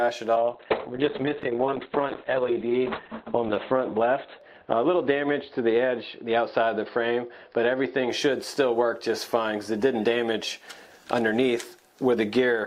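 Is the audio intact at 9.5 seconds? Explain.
Yes, the audio is intact at 9.5 seconds, with no dropout, click, distortion or other fault audible at that point.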